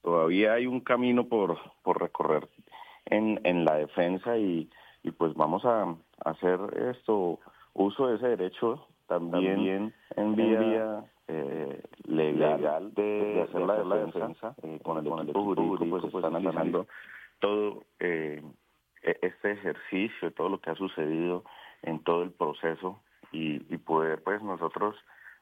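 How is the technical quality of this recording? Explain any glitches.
The recording has one clear glitch: a doubled audio track from 9.31 to 16.77 s. The likely cause is the same signal reaching the mix twice, once directly and again through a slower path, or an edit that left two copies out of alignment. The second copy runs about a fifth of a second behind at roughly the same level, so every sound is repeated as a distinct, dry echo with no decay. The doubling switches on and off abruptly at both ends.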